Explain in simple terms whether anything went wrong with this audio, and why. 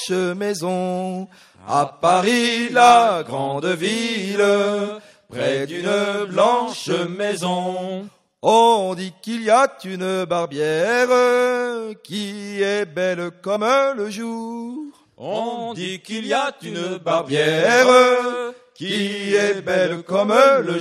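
Compressed frames were skipped: small chunks of the encoded audio never reached playback, either lost from the file or rejected by the decoder as damaged. Each time, the sound jumps ahead. This happens at 8.07–8.09 s and 13.55–13.57 s, each skipping about two 23.2 ms frames (roughly 50 ms), and at 19.91 s, skipping about three (roughly 70 ms).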